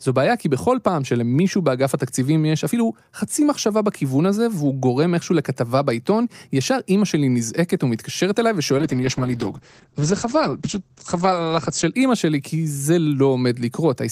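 From 8.78 s to 12.0 s there is a call bitrate drop. The sound turns coarse and muffled, consistent with the encoder falling from around 48 kbps to about 10 kbps. Audio bandwidth shrinks from 20 kHz to 8 kHz, holding its worst state for about 3.1 s before recovering.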